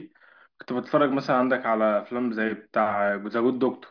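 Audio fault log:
No faults can be heard anywhere in this speech recording. There is nothing to enter against any time in the log.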